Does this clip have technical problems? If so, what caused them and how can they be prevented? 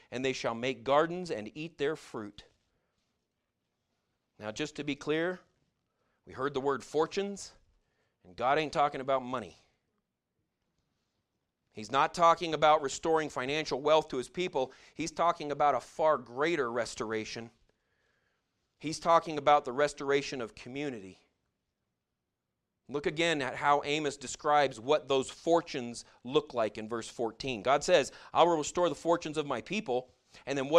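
No, this clip has no technical problems, so there is nothing to trace to a cause or prevent.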